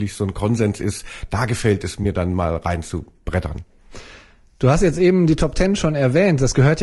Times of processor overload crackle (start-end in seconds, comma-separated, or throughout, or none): none